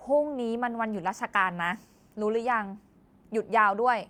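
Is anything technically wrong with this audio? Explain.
No, nothing technically wrong can be heard here.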